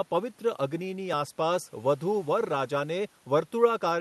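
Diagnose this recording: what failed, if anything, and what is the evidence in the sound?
Nothing failed, and the sound gives no evidence of a fault: the speech came through a WebRTC call path with an Opus codec and jitter buffer working as normal.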